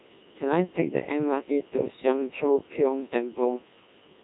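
From start to finish the speech carries the Codec 2 vocoder's signature: a robotic, buzzy voice rebuilt from sine waves rather than the original waveform. Only pitch, voicing, energy and a coarse spectral envelope survive, and the heavy smearing suggests a very low rate, fitting the 1.2 kbit/s mode. A spectrogram shows evenly stacked, overly clean harmonics with nothing above 3.8 kHz. The waveform looks regular and synthetic, lacking natural irregularity.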